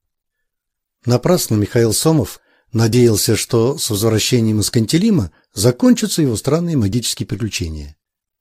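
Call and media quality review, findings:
Overlap between stream segments at 6.93 s. Single click or tiny skip. Probable component: segmenter or player join logic with 4 s segments. Two segments' timestamps overlap, so the player trims about 6 ms of real, undoubled audio. Waveform shows an abrupt step discontinuity. Spectrogram shows a thin vertical broadband line.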